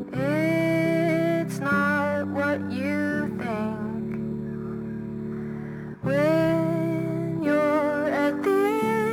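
Throughout the music, a crude rate conversion picks the nearest existing sample instead of filtering, which fits a 48 kHz to 44.1 kHz change. The resulting error sits roughly 30 dB below the music, heard as a gritty, inharmonic fizz trailing loud and bright passages.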